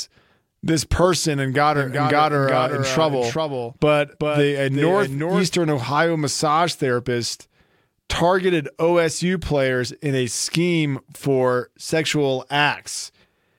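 This is a speech clip with a doubled audio track. Just after "this person and got", at 1.75 s, a second copy of the speech appears abruptly. It trails the original by roughly 0.4 s and sits around 5 dB quieter. It is full-band, with no decay or room colour, so it is not an echo. It stops just as suddenly at 5.59 s. The likely cause is the signal being captured a second time through a slower path.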